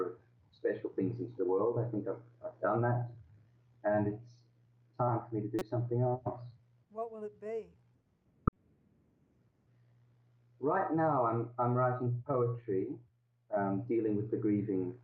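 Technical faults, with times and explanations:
5.59–5.62 s and 8.47–8.56 s, corrupt frame decoded: Damaged compressed frames were played anyway, so energy landed at wrong frequencies. The first is brief and quiet, fitting a couple of frames. The second is longer and far louder, near -10 dBFS.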